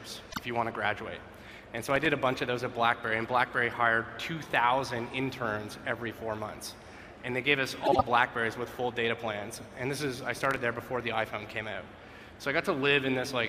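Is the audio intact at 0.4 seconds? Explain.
No. Just before it, from 0.31 to 0.39 s, frames out of order swap two 24 ms frames, so the sound briefly flutters, garbled.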